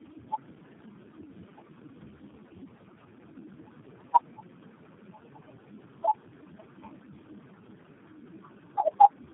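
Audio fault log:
Throughout: tandem speech coding. The speech passed through three low-rate speech codecs in a row, ending at G.729A, with each one re-coding the previous one's damage. The result is rough, muffled and warbly. A spectrogram shows nothing above 3.8 kHz and smeared, blotchy formant bands.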